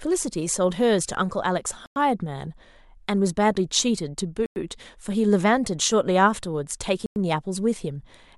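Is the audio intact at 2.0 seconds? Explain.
No. The audio arrives in chunks of about 2.5 s, and a gap between chunks leaves silence at the join, here from 1.86 to 1.96 s, just before 2.0 s. The speech stops for 100 ms and resumes with nothing lost.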